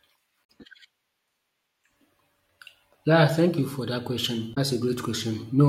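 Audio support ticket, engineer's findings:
Damaged data in the compressed stream, two hits. First at 0.41–0.50 s: short glitch. Second at 4.51–4.58 s, right after "thank you for that": same kind of glitch. Points at the decoder choking on corrupted frames, losing sync and hunting for the next good frame header. Look upstream at the file or transport, not playback. Bad bytes in the stream itself.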